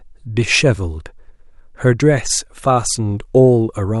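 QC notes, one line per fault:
Nothing stood out on listening to this speech clip.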